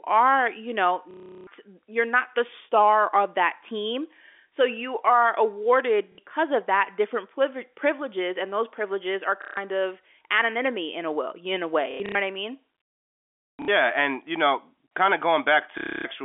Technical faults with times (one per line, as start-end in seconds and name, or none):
1.11-1.47 packet loss with last packet repeated
6.12-6.18 packet loss with last packet repeated
9.42-9.57 packet loss with last packet repeated
11.91-12.15 packet loss with last packet repeated
13.56-13.68 packet loss with last packet repeated
15.78-16.05 packet loss with last packet repeated